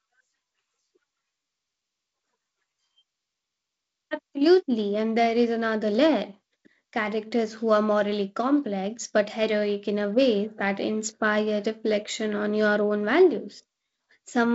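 No faults; the speech runs over a G.722 wideband telephone path at 48 kbit/s, with nothing above 7.7 kHz and only the light upper-band hiss and slightly noisier lower band that this coding leaves at that rate.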